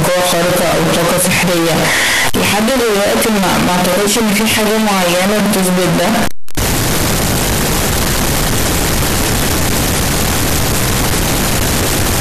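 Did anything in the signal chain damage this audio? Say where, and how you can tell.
Yes. Across the whole speech clip the waveform sits as a near-square block at an almost fixed, high level, very loud and harsh, with background noise raised to the level of the speech, while the pitch contour stays traceable. That points to the sample-format conversion stage, most likely a float read as integer: 32-bit float samples interpreted as 32-bit integers. The sign and exponent bits then dominate each value, discarding the original dynamics.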